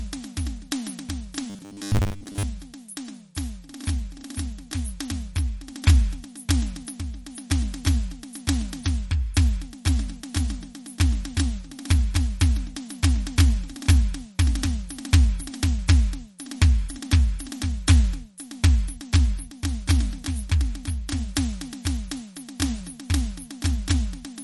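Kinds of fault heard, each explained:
MP3 compression: The encoder likely ran short of bits, at a rate that sounds close to 43 kbps, so it kept only what its hearing model ranked as important. Weaker frequency lines drop in and out between frames, giving a plainly audible watery, swirling texture with smeared attacks throughout.
Robotic sound from repeated short buffers: From 1.50 to 2.43 s, fresh audio likely arrived too slowly and the playback repeated its last short chunk instead, so most of that stretch, around 70 percent, is recycled rather than new. The 10 ms repeats impose a fixed 100 Hz buzz on the music, turning it into a rigid metallic drone that only loosely follows the original.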